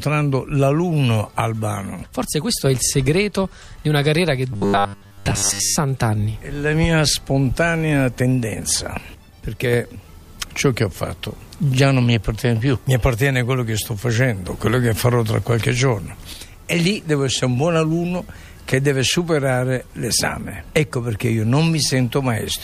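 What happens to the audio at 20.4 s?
Nothing goes wrong at 20.4 s; the audio plays through that moment intact, with no dropout, click, distortion or other fault.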